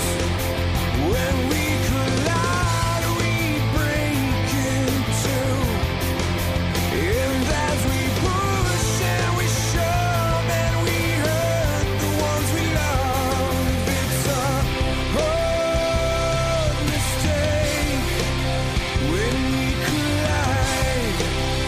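A thin, fixed-pitch whine sits under the sound for the whole clip, built on 1 kHz with its strongest component at 4 kHz, roughly 30 dB below the signal. This is USB whine: the bus's 1 ms frame activity draws current that leaks into the audio through power or ground.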